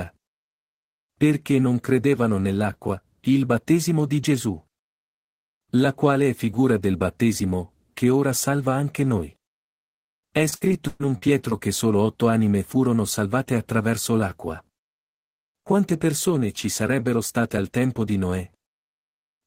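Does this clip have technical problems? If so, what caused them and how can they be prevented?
Yes. Repeated packet loss (robotic sound) occurs from 10.49 to 11.53 s, just before "che solo otto anime". Across that second the speech breaks up six times. Each time a stretch of audio fails to arrive, the receiver fills the hole by extending the sound it last had. That patching covers about 280 ms in total, or roughly a quarter of the span, and the longest single gap is 123 ms. The repeated, smeared fills give the choppy quality. To prevent it, use a more stable network path with a larger jitter buffer, or use forward error correction so that lost packets can be rebuilt.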